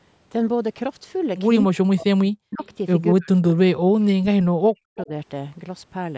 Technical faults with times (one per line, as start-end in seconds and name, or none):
1.67-2.61 speech suppressed in double talk
2.51-2.67 echo leak
3.14-5.12 speech suppressed in double talk
4.98-5.03 echo leak